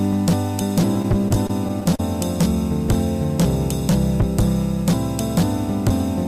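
From 0.94 to 2.00 s, repeated stalls (stutter): packets kept arriving late, so the playback buffer ran dry about nine times and the last sound was stretched to fill each wait, about 146 ms in total, the longest 36 ms. Nothing is lost, but the audio drags and hiccups. A spectrogram shows short flat, smeared stretches where the frequency pattern freezes.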